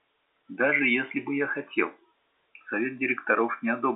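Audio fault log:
Nothing to log here: the speech just has the narrow, boxy sound of an ordinary phone line, with nothing coming through above about 3.8 kHz.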